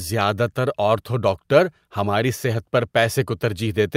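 Nothing stood out on listening to this speech recording.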